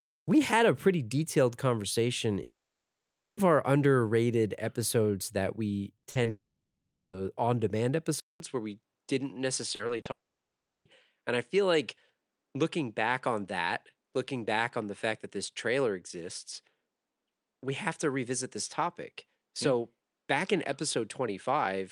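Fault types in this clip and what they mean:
long network dropout: The connection likely stopped delivering audio for most of a second at 2.43, 6.29 and 10.11 s. Each time the last sound carries on briefly, then falls to silence for about 0.85, 0.74 and 0.70 s, and the speech resumes with that stretch missing.
burst of packet loss: A short run of packets arrived too late or not at all between 5.97 and 6.05 s. The receiver held the last sound over the resulting 60 ms gap, letting it fade, and the speech picks up later with that slice gone.
short concealed packet loss: Just after "underrated episodes that we", two tiny holes at 6.11 s (40 ms) and 6.23 s (20 ms) were patched by extending the preceding sound and blending back in. They come across as brief smears rather than clean speech.
input switched to a poorer device: The recording likely changed to a lesser input at 8.2 s. After a 200 ms silence, the sound continues with nothing above 10.2 kHz. 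It is also roughly 5 dB quieter and carries a new low background noise.
repeated packet loss (robotic sound): Between 9.75 and 10.07 s, packets went missing four times in quick succession, the longest gap 40 ms. Patching filled 120 ms, over a third of the stretch, which makes the speech choppy just before the last dropout.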